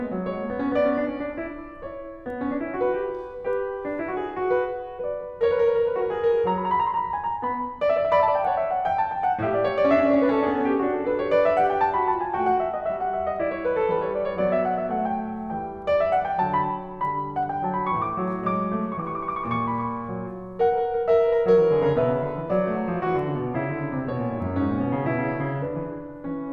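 No technical faults in this music.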